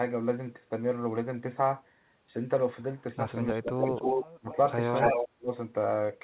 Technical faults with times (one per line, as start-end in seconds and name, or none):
3.53-3.95 speech suppressed in double talk
3.63-4.56 echo leak
4.41-4.50 speech suppressed in double talk
4.94-5.26 echo leak
5.12-5.50 speech suppressed in double talk